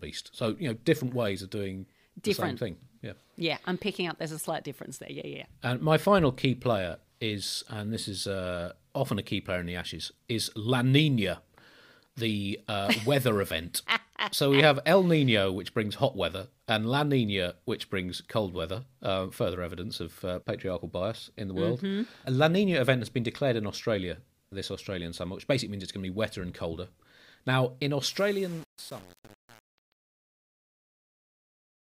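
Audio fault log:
28.09–31.82 s: truncation distortion on a fade. The fade-out starting around 28 s is processed without dither and with too little resolution, which fits roughly a 7-bit gain stage. As the level drops toward the smallest step, the waveform collapses into a few coarse square steps. The tail of the fade turns gritty and buzzy before the clip ends, rather than dying away smoothly.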